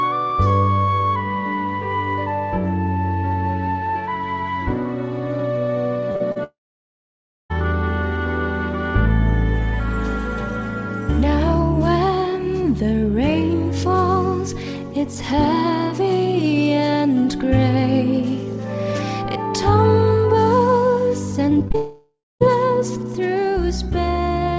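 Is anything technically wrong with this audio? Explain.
Yes. The audio, carried over a G.722 call path whose spectrogram shows nothing above 8 kHz, has packet-loss faults in two clusters.

Short concealed packet loss at 6.12–6.16 s, 6.16–6.22 s and 6.32–6.38 s: about 20 to 40 ms went missing each time, and the receiver extended the preceding sound to cover it. You hear brief smears or wobbles. A spectrogram shows smoothed, repeated patterns where detail should vary.

Long network dropout, which is the likely cause of two stretches at 6.44–7.52 s and 21.76–22.43 s. Concealment briefly continues the last sound, then it decays to silence, lasting roughly a second in the first case and a quarter-second in the second. The waveform flattens to near zero, and the audio resumes with that section gone.

Repeated packet loss (robotic sound) from 21.50 to 21.76 s, just before the second dropout: four gaps, the longest about 21 ms, with roughly a quarter of the span patched. 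The result is choppy. The spectrogram shows a stuttering band of repeated, blurred frames.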